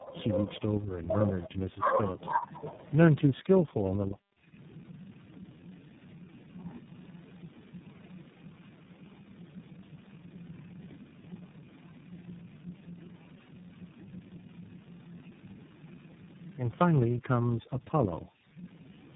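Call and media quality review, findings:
Call and media quality review, findings:

Tandem speech coding, whole clip: rough, muffled, warbly speech, nothing above 3.8 kHz. Three speech codecs in a row (G.729A, GSM full rate, iLBC) with G.711 hops between them. Each recodes prior artefacts, so degradation exceeds any single low-rate codec.

Speech suppressed in double talk, 1.44 to 2.69 s: talker dips by roughly 25 dB, around a second affected in total. Likely echo canceller suppressing during overlap. Suppression during far-side playback, not packet-loss glitches.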